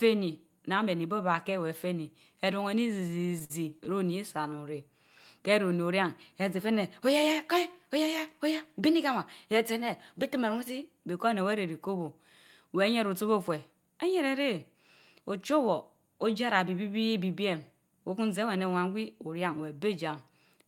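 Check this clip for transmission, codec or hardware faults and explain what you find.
Two network faults affect this speech clip.

From 2.87 to 3.92 s there are repeated stalls (stutter). Packets arrived late, so the jitter buffer ran dry 13 times. The receiver stretched the last sound to cover 169 ms in total, the longest gap 54 ms. Nothing is lost, but the speech drags and stutters.

From 18.43 to 19.58 s there is a jitter buffer speed-up. Too much audio had piled up in the buffer. The receiver trimmed many tiny pitch-period slices, some 70 ms in all. Speech runs about 6% fast at unchanged pitch and sounds hurried.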